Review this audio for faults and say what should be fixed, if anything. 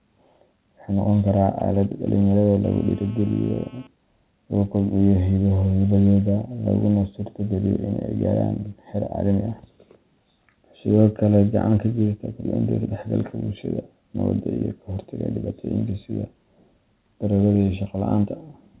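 GSM phone buzz runs from 2.64 to 3.87 s: a hard, raspy tone at a 217 Hz burst rate with a dense harmonic series, about 28 dB below the speech and unrelated to it. A nearby 2G handset transmitting in time-slotted bursts is being rectified by the audio input circuitry. The buzz is nearly steady, which points to an active voice call. Prevent it by keeping phones well away from the microphone and cabling, or by using shielded, RF-filtered inputs.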